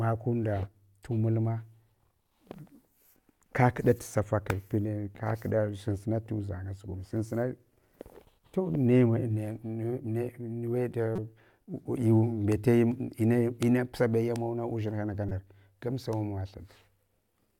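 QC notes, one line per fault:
11.16–11.19 s and 15.29–15.32 s, corrupt frame decoded: short chirpy bursts of noise, peaking around -20 dBFS, the second just before "gamsa amawa". Damaged compressed frames, about one and two respectively, were decoded anyway, so misread gains and codes scattered energy across wrong frequencies.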